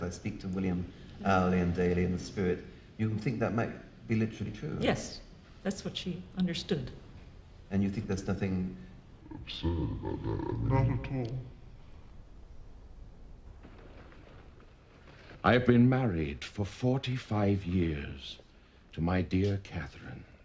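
From 9.21 to 13.46 s, a wrong sample rate, consistent with 24 kHz audio played at 16 kHz, slows it to 0.667 speed, 7 semitones lower.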